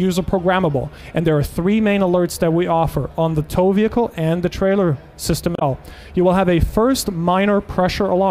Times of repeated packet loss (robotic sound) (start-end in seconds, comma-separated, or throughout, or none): none